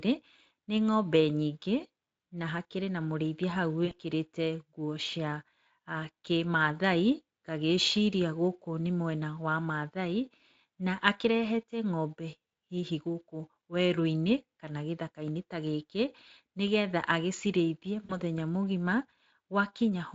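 VoIP packet loss concealed by the speech codec occurs twice, at 3.85 to 3.93 s and at 18.05 to 18.20 s. When packets go missing, the decoder has nothing new to play, so it keeps resynthesising from the last pitch and filter it had while lowering the gain. The speech smears into a buzzy tone or coloured noise that fades. The gaps are about 60 ms and 40 ms, which fits lost 20 ms frames, and the light Speex coding underneath carries through.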